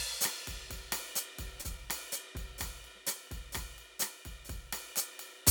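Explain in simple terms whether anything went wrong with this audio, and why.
Around 1.61 to 1.79 s, the music briefly hangs on one sound, held a touch too long with a faint buzz or dip, then carries on. This is a short stall from a late packet: a piece of audio arrived late, so the player stretched the last sound about 32 ms until it arrived.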